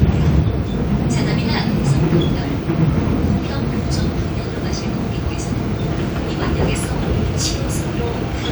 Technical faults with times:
none

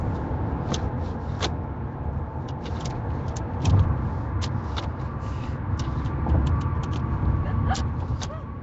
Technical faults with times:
0.00-8.62 Nellymoser compression

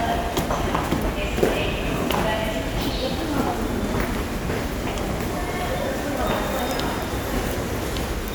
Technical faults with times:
none

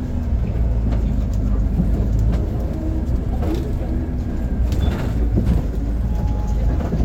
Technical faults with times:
2.73 block of digital silence
5.54 block of digital silence

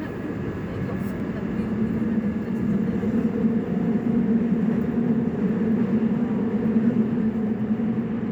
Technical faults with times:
1.20 block of digital silence
7.47 block of digital silence

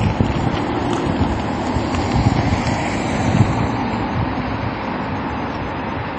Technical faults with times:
0.00-6.19 MP3 compression

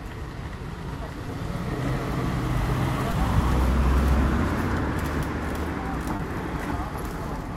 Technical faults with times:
1.26-1.28 short concealed packet loss
3.11-3.13 short concealed packet loss
6.16-6.20 short concealed packet loss

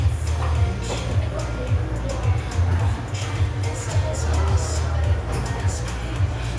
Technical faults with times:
none

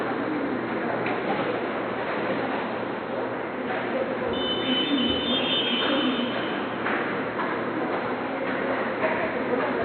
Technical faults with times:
none

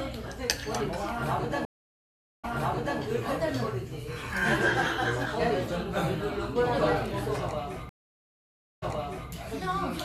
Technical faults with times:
1.65-2.99 stream reconnect
7.89-9.31 stream reconnect

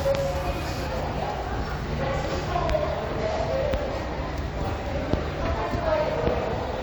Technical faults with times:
0.87-6.83 channel delay (comb filtering)

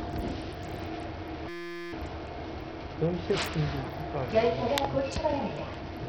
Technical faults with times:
0.00-6.09 Bluetooth SBC compression
1.49-1.93 system hang loop

